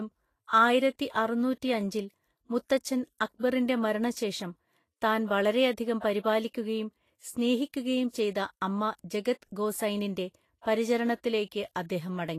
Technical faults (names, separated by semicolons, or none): Vorbis compression